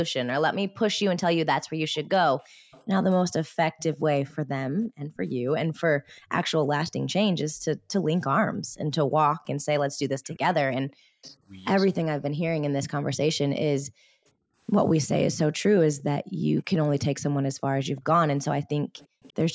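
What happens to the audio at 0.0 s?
Nothing goes wrong at 0.0 s; the speech there is intact, with only the ordinary call microphone processing shaping it, its low bass trimmed and no content above 8 kHz.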